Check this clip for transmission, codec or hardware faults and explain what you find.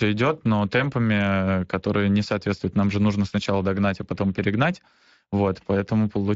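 There's one codec problem running through the whole speech clip. Speex codec damage, start to finish: the CELP coder is short of bits for the excitation, so speech comes out noticeably noisy and hoarse. That fits a Speex setting around 20 kbps.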